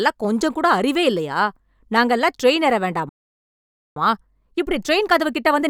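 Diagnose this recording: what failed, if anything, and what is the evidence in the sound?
The playback stage failed. Right after "நாங்க எல்லாம் ட்ரெயின் ஏற", the speech cuts to silence at 3.09 s and resumes at 3.96 s, a gap of about 0.87 s. This is likely a playback stall, where the player starved or blocked.

From 3.96 s to the end of the clip, the speech runs about 1.1 times faster while keeping its normal pitch. This is time-compressed catch-up: the player trims and cross-fades small slices to drain its backlog. Steady pitch separates it from a sample-rate mismatch, which would raise pitch along with speed.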